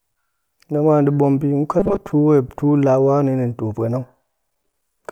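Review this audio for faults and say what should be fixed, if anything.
Robotic sound from repeated short buffers, 1.80 to 2.12 s: the voice turns into a rigid metallic buzz at 200 Hz for most of that stretch. This is likely from audio arriving too late, so a short slice, which fits about 5 ms, was looped in place of the missing sound. Prevent it by giving the playback or transport path a larger jitter buffer with proper concealment, so late audio is never filled by looping a tiny slice.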